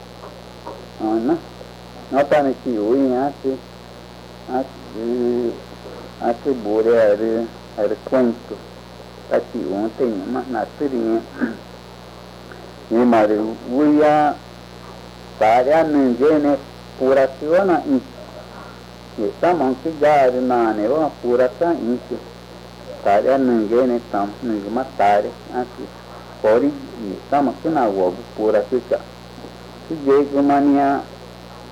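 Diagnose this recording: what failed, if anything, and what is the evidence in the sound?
What failed is the analogue wiring: there's a mains buzz running under the whole recording from start to finish. It's a steady, raspy buzz built on 60 Hz, sitting roughly 20 dB below the programme, with a gritty edge that climbs well up into the kilohertz range. That rasp comes from sharp switching spikes from something like a dimmer or rectifier, or coupling through a missing shield, landing twice per mains cycle and throwing off a long ladder of harmonics.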